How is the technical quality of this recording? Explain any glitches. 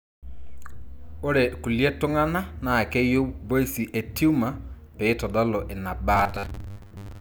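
One glitch stands out: robotic sound from repeated short buffers, from 6.15 to 7.20 s at the end of the clip. The speech collapses into a stiff, metallic buzz pitched at 100 Hz that still roughly traces the words. The likely cause is audio arriving too slowly, so the playback repeats the last stretch of roughly 10 ms over and over, about half the time, skipping real audio and imposing that fixed buzz pitch.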